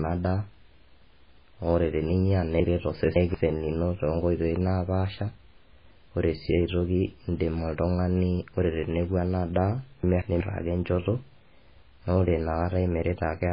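It's a speech recording with a watery, swirly sound and nothing above about 5 kHz, likely MP3 compression at a very low rate, around 16 kbps. There are also two chunks out of order. From 2.60 to 3.34 s the audio jumbles, as if a 0.19 s chunk played about three chunks late. At 10.03–10.40 s there's a shorter jumble, which fits a chunk arriving one late.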